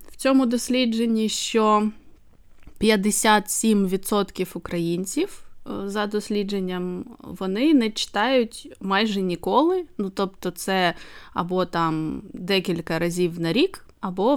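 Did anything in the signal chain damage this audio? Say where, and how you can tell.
No, nothing in the signal chain has audibly damaged this speech recording. No stage between capture and playback has left any mark that can be heard.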